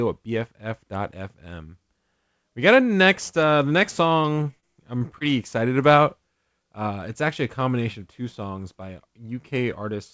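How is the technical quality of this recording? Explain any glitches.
The audio has the band-limited character of a call, with nothing above 8 kHz, which fits a G.722 call path, and it has one glitch.

From 4.22 to 5.23 s, between "next uh the next" and "excited about", the sound turns choppy. This is repeated packet loss: a run of short gaps, the longest about 24 ms, left 80 ms missing, and 148 ms was patched by stretching the preceding sound.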